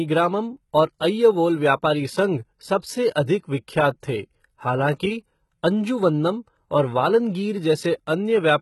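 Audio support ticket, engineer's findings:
Sibilants gritty, metallic and lispy across the whole speech clip; treble synthetic, nothing above 11.8 kHz. Likely HE-AAC compression, heavy damage fitting roughly 16 kbps: upper band rebuilt by spectral band replication from copied lower bands, harmonics misaligned at crossover.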